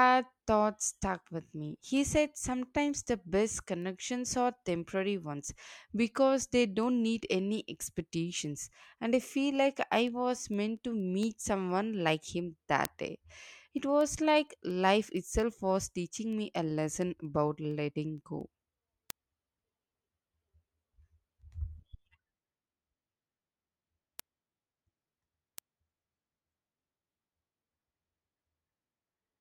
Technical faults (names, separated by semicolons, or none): word clock ticks